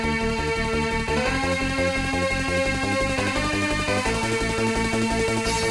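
No technical faults can be heard anywhere in the audio, and the signal holds steady throughout.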